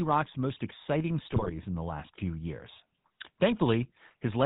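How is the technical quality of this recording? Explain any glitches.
The recording is fairly rough, with plainly audible codec damage throughout and one burst of corruption early on.

The whole clip has the sound of the GSM full-rate codec, a buzzy, gravelly texture with nothing above 4 kHz, which fits a 13 kbps full-rate stream. The codec rebuilds speech from a vocal-tract model fed by coarsely spaced pulses, so the fine detail of the voice is lost and replaced with that grainy buzz.

From 1.25 to 1.55 s there's a burst of GSM bit errors, where the speech turns into squawks, pops and gargling. Corrupted bits are reaching the decoder, which sounds like somewhere around 1.4% of them flipped. Bad filter, pitch or gain values warp the spectrum and make the level jump from one frame to the next.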